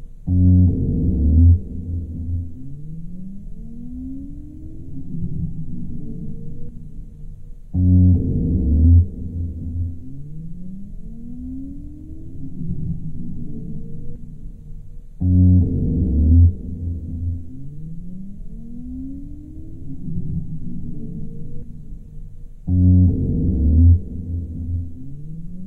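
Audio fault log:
Nothing to log here: these sounds come through without any fault turning up along the way.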